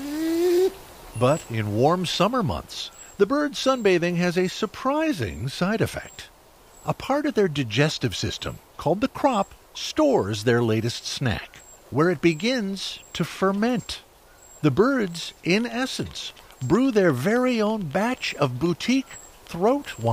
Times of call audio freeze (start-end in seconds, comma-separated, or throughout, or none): none